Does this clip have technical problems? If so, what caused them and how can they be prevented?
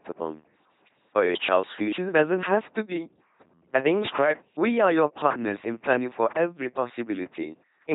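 Yes. Two faults run through the whole speech clip.

The first is sample clock jitter. The converter's clock wavers by a few microseconds, so each sample lands slightly off its proper instant. Steep, fast-changing parts of the waveform suffer most. The result is a faint grainy hiss, roughly 35 dB below the signal. It rides on louder and brighter sounds and disappears in the pauses. It can be prevented by using a converter with a stable, low-jitter clock or a clean external reference.

The second is heavy LPC-10 vocoder damage. The speech comes out buzzing and robotic. Each moment is rebuilt from a simple filter driven by either a pulse train or noise, never a mix. Where that choice goes wrong, buzz or hiss replaces the natural sound. Nothing remains above 3.9 kHz. The harshness fits a 2.4 kbit/s LPC-10 encoding. It can be prevented by using a modern, higher-bitrate speech codec instead.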